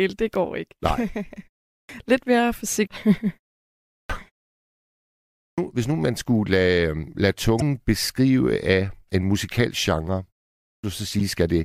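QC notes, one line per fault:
1.71, 3.92, 5.41 and 10.64 s: clipped start after a pause. After silences of 0.3 to 1.19 s, the output device is still waking when speech resumes, so about 170 to 200 ms of onset is swallowed. Words begin abruptly, as at "hvis nu man skulle" and after "af en musikalsk genre".
2.84–2.87 s, 7.56–7.62 s and 11.19–11.21 s: damaged data in a compressed stream. Corrupted frames throw the decoder out of sync while it hunts for the next valid header. Each is a brief chirp or blip, the middle one falling between "øh lade" and "beskrive af en musikalsk".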